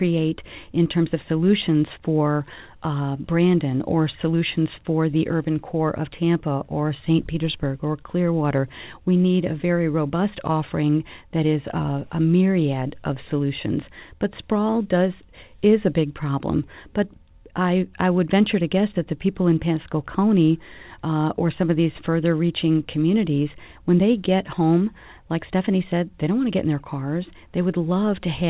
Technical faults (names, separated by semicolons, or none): none